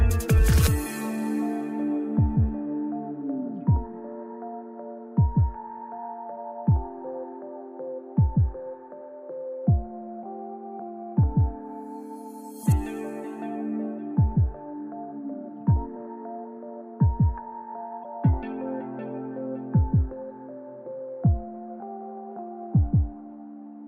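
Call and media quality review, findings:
Damaged data in a compressed stream, 15.93 to 15.96 s and 18.01 to 18.05 s: two brief blips, about 40 ms each. Decoder misreads corrupted frames and resyncs at the next header. Unlike a network dropout, which gives silence or smoothed concealment, each event is a chirp, click or short hole.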